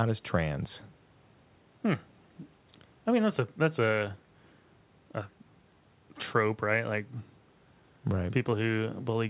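Listening to this speech recording, nothing stood out as a technical problem, and the band stopping at about 4 kHz is simply what an ordinary narrowband call path gives.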